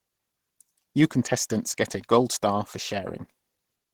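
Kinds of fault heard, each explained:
Opus compression: The speech has a plainly audible hoarse, grainy roughness, with the upper range thin and noisy rather than clean, although content still reaches to about 20.4 kHz. This is likely the Opus codec running in its hybrid mode, which codes the lower speech band with its speech coder and fills the highest bands with coarse band energy and noise. The roughness fits a starved bitrate of around 16 kbps.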